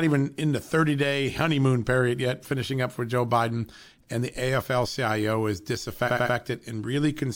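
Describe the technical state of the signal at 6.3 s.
At 6.3 s the speech stutters. This is repeated frames from 6.06 to 6.34 s: a roughly 93 ms block, which fits two compressed frames, plays three extra times, adding about 0.28 s.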